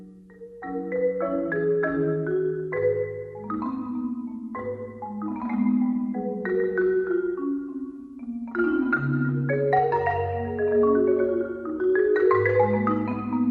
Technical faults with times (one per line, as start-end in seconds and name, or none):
0.00-13.51 MP2 compression